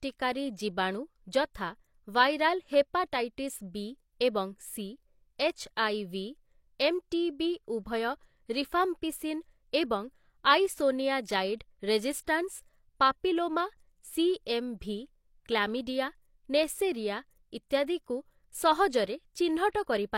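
A transform codec spread its quantisation noise across a whole block, so noise meant for a sharp attack leaked into the quiet just before it. At 19.70 to 19.75 s this pre-echo is heard as a 45 ms hiss ahead of the attack, which sounds softened and smeared.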